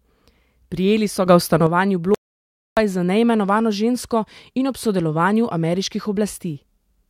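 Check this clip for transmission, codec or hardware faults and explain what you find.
Two faults stand out in the speech. From 1.27 to 1.67 s there is a sudden gain jump: a digital gain change likely applied without a ramp lifts the speech and background noise together by about 6 dB for that stretch. From 2.15 to 2.77 s there is an audio dropout to silence: the input was likely lost while zeros kept being written, so the speech cuts out for 0.62 s into dead silence with no room tone.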